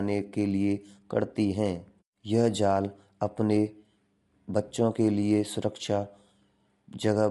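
Throughout, the speech sounds plainly rough and grainy, with nothing above 11.6 kHz, the damage of likely low-delay AAC compression at a bitrate near 32 kb/s.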